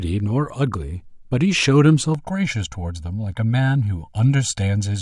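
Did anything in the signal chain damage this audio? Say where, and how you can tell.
Yes. Channel delay (comb filtering) from 2.15 s to the end: the speech turns hollow and phasey. One channel arrives roughly 1.5 ms late and is summed to mono, so shared content cancels at evenly spaced frequencies, the first notch near 400 Hz.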